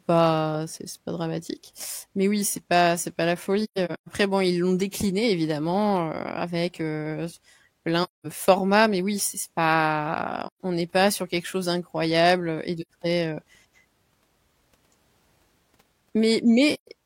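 Soft gaps break this French speech five times. Each is AAC frame loss with muting: the decoder received no data for some frames and zeroed their spectrum. Overlapping windows fade each hole in and out. At 3.64 s, after "pas c'est pas la", dropouts scatter across 0.45 s before "bon ils l'ont décliné". The longest run is around 150 ms. Further holes fall at 8.03 s, at 10.46 s before "on n'est pas sur", at 12.81 s before "très heu", and at 16.73 s.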